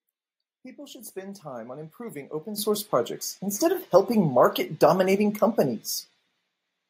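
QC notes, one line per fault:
2.58 s and 3.6 s, microphone volume stepped up: the call software raised the input volume in single steps, about 10 dB then about 3 dB, so speech and background both jump louder together.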